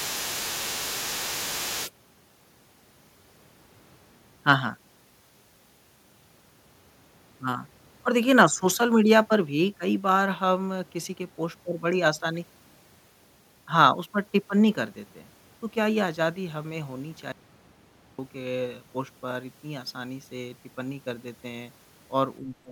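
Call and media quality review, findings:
Other side's voice leaking through, 0.00–1.92 s: echo canceller likely left residual far-end loudspeaker signal in the mic path; second voice audible at about 10 dB below the talker.

Audio dropout to silence, 17.32–18.19 s: input likely lost, encoder writing silence; sound cuts to silence with no room tone for 0.87 s, content in the gap gone.

Speech suppressed in double talk, 22.40–22.72 s: echo canceller likely mistook simultaneous talk for echo and attenuated both; talker dips by about 25 dB for roughly 0.3 s, until the clip ends.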